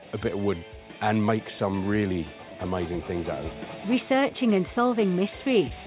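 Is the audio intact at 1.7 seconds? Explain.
No. At 1.7 s the clip is inside a stretch of repeated timing corrections running from 0.01 to 3.77 s. The receiver keeps repeating short fragments to compensate, stretching playback to 98% speed and adding about a tenth of a second overall. Each edit is small, heard if at all as slight hiccups and an unsteady tempo.

The cause is clock drift between sender and receiver throughout the clip, with the sender's clock running roughly 2% slow. The jitter buffer drains, forcing those insertions at uneven intervals. The G.711 A-law call path carries nothing above 4 kHz.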